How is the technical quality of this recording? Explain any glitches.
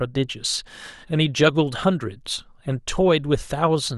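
The technical quality of this recording is good, with no glitches to explain.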